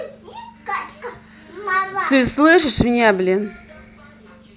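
No technical faults turn up anywhere in the speech, so there is nothing to set out in time order.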